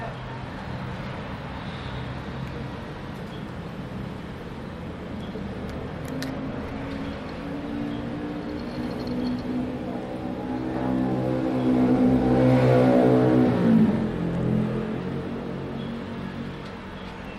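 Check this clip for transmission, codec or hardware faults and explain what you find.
Two drift correction steps: from 2.13 to 3.18 s playback runs 5.9% fast, about a semitone sharp, and from 14.04 to 15.00 s it runs 5.9% slow, a semitone flat, then snaps back. It's likely clock-matching software retiming playback to keep its buffer level.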